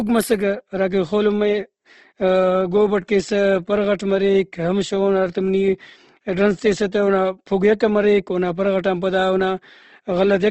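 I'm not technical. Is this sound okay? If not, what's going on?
No. The speech was likely squeezed hard by Opus compression, which saves space by rebuilding parts of the sound roughly instead of keeping them exactly. From start to finish that leaves it grainy and rough, with nothing above 12.1 kHz, so the top end sounds dulled.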